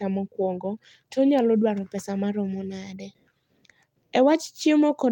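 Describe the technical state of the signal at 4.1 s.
At 4.1 s the signal is intact, with no audible technical fault at that moment.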